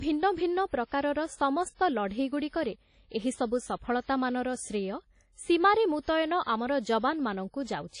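From start to finish the speech carries plainly audible codec damage, likely from WMA compression. Nothing sounds above 10.1 kHz. Long transform blocks smear quantisation noise around each syllable. The result rings and washes, with hiss breathing alongside the voice, which fits roughly 32 kbps.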